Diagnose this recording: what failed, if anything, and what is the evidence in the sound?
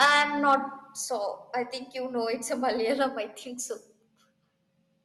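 The first half-second, from 0.0 to 0.55 s, is distorted by microphone overload at the converter stage. Peaks exceed full scale by about 11 dB, and a few percent of samples are clipped. On a waveform those peaks show as flat tops pinned at the rails. On a spectrogram they show as bright vertical smears of broadband energy reaching up to the roughly 12 kHz ceiling of the Opus call path. The likely cause is input gain set too high, so the converter runs out of range.

There are three one-step drops in level, each a case of microphone volume stepped down in the call-processing stage. The first is at 0.05 s, about 4 dB. The second is at 1.05 s, just before "I think you know", about 4 dB. The third is at 3.09 s, just after "you know it's a", about 3 dB. On a waveform the envelope steps abruptly lower and stays there. On a spectrogram the whole band dims at once, background included. The likely cause is automatic gain control lowering the device's input volume after detecting the overload.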